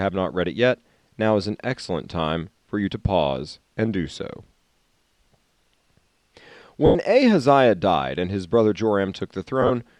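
Lost LE Audio frames at 6.86–6.95 s and 9.62–9.71 s: the decoder fills the gaps by replaying the last spectrum with scrambled phase, so the sound smears into a noisy, faded blur. The first loss is about 90 ms; the second is broken bursts over 80 ms, the longest run around 30 ms.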